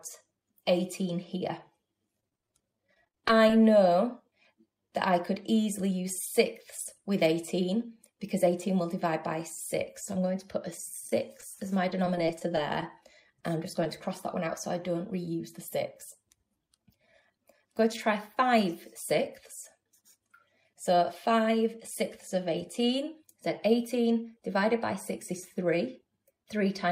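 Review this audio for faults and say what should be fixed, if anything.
Repeated packet loss (robotic sound) runs from 2.20 to 3.53 s. Nearly twenty holes fall inside that 1.3 s stretch, each patched by extending the preceding sound before the next hole arrives. About 160 ms of real audio is missing and 225 ms is synthesized, so roughly 17% of the span is concealment. The longest single gap is 28 ms. Because the holes come so close together, the patches chain into a choppy texture with pieces missing. Prevention: stabilise the network path and enlarge the jitter buffer so that late packets still arrive in time.

Scattered short gaps appear between 11.07 and 13.06 s. There are around ten isolated holes spread across about 2 s, none much longer than 20 ms. Together they lose 70 ms of audio. Roughly 150 ms is filled by extrapolation, about 7% of the span, and 24 ms is dropped outright, which shortens playout slightly. 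Each hole is heard as a brief tick or smear rather than continuous distortion. Prevention: add forward error correction or redundancy so that isolated losses can be rebuilt instead of guessed.

A short concealed packet loss sits at 13.84 to 13.86 s. About 10 ms of audio failed to reach the decoder in time. The receiver covered it with 11 ms generated from the last received sound, then cross-faded back into the real signal. The result is a single momentary wobble, close on the heels of the scattered gaps before it. Prevention: the same jitter buffer and redundancy measures, applied consistently across the call.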